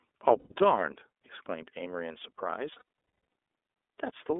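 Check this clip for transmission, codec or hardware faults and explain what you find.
Two faults are audible in this speech clip: the whole thing runs through the iLBC codec, and it has two bursts of lost iLBC frames.

The iLBC codec is audible throughout. It squeezes the sound into a 300 Hz to 3.6 kHz phone band and codes each frame independently. The damage is plainly audible as a thin, slightly rough, synthetic edge, which fits iLBC's 30 ms, 13.33 kbps mode.

Lost iLBC frames show up twice, first at 0.39 to 0.54 s, about 120 ms missing. The second hit, around 2.72 to 2.81 s, is worse: roughly 420 ms lost, scattered across 600 ms, with the longest run near 0.3 s. In each gap, the decoder repeats the last pitch cycle mixed with noise, so you hear a held, buzzy vowel that fades on the longer stretch and then snaps straight back.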